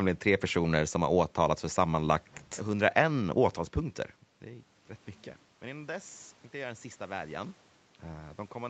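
From 5.59 s, just after "är rätt mycket", the input level drops by about 16 dB, and the automatic gain control answers by raising its gain gradually through to 8.69 s. This automatic gain rising lifts the speech and the room noise together, so the background swells audibly along with the voice over those three seconds. The earlier level shift near three and a half seconds is different: there the talker simply moved.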